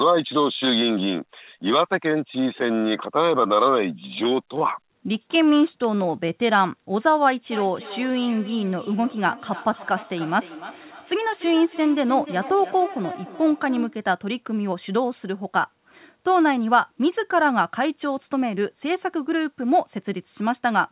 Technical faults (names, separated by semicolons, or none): feedback echo between two devices